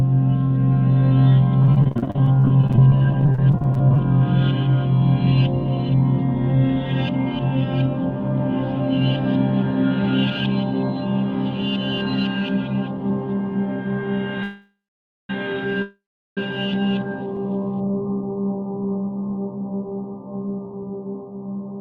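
From 1.62 to 3.99 s, packets were repeatedly lost or arrived too late. The receiver filled each hole by extending the last stretch of sound, and then another hole followed almost at once. This is repeated packet loss: about 38 gaps, none longer than 36 ms, with roughly a quarter of the span concealed. The result is choppy, robotic sound. About 0.57 s is patched over, and about 0.47 s of the original audio never arrives.

At 14.43 s the jitter buffer ran dry, likely because packets were held up in transit, and the sound freezes for 0.86 s. The last fragment carries on as a fading buzz or hiss and then goes silent for about 0.54 s. A second call audio freeze from 15.82 to 16.38 s stretches the same way for 0.55 s, with about 0.38 s of it silent. Each time, playback resumes exactly where it stopped, so nothing is lost. Both freezes add a pause to the audio.

From 17.85 to 18.57 s the jitter buffer was low on reserve. 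To rebuild it, the receiver repeated single pitch periods and bits of quiet many times in a row, adding 76 ms. This jitter buffer slow-down plays the passage at 90% speed without changing the pitch. The sound comes out drawn out and slightly sluggish.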